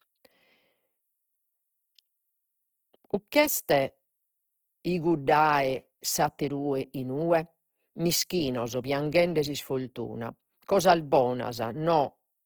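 Across the whole clip the speech turns grainy and rough, which is likely Opus compression in music mode, fitting a low rate near 16 kbps.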